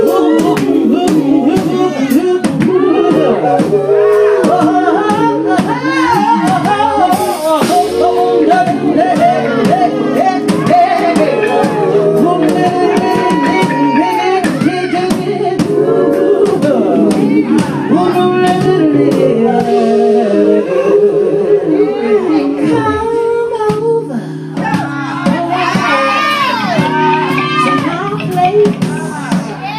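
No faults turn up anywhere in the audio; nothing to flag.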